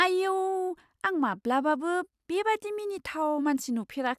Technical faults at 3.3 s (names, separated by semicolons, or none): none